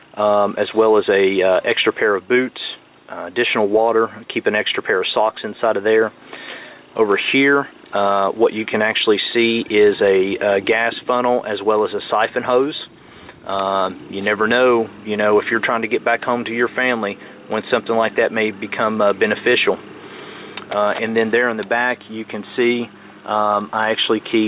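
No technical faults are audible.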